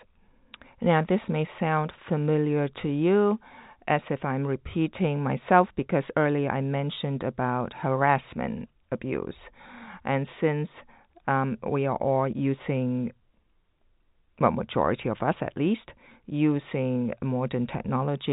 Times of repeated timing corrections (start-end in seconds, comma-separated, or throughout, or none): none